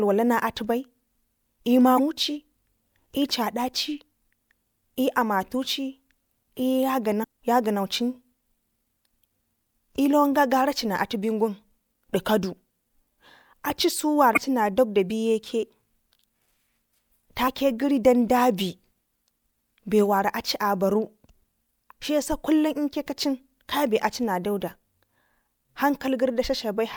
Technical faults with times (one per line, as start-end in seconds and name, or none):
1.95-1.99 damaged data in a compressed stream
7.20-7.25 damaged data in a compressed stream
14.33-14.38 damaged data in a compressed stream
17.44-17.48 damaged data in a compressed stream